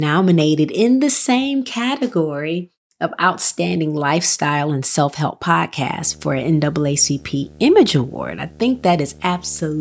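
From 5.99 s to the end of the clip, a video or display buzz sits under the speech: a screen or video cable is coupling into the audio path, adding a steady 75 Hz buzz, the picture's field rate, with a gritty hash above it, roughly 20 dB below the speech. On a spectrogram it appears as evenly spaced horizontal lines at 75 Hz and its multiples, with fuzzy energy between them, all stopping at the call processing's 8 kHz ceiling.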